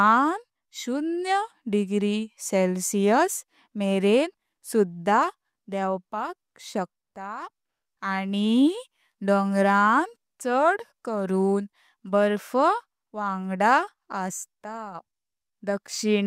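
Nothing in this recording of speech comes across as a technical fault; there's no moment where anything goes wrong in how it sounds.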